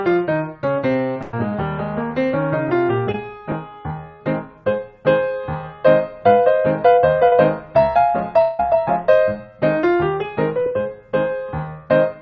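A burst of packet loss at 1.22 to 1.34 s replaces about 110 ms with a continuation of the preceding sound that fades away, and the audio resumes further on with that stretch missing. Short concealed packet loss occurs at 3.12, 7.28 and 10.62 s, where gaps of roughly 20 to 40 ms were filled by extending the last sound and blending back, heard as brief smears or wobbles. At 8.42 to 8.60 s a fading held continuation covers about 170 ms with no silence, and the audio picks up later; this is likely a long network dropout that the receiver concealed. Throughout, the audio carries nothing above 8 kHz, which fits a G.722 call codec on a WebRTC path.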